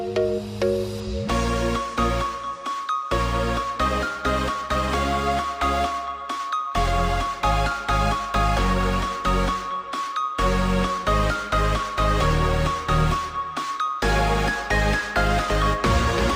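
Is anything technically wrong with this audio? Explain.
Yes. From 1.00 s to the end, there is channel delay (comb filtering). One channel runs late by only a couple of samples, a few hundredths of a millisecond, and when the two channels are combined into mono the shared content cancels where they fall out of phase. With such a tiny offset, the first notch sits high, around 10 kHz, so the top end loses its air and sounds dull.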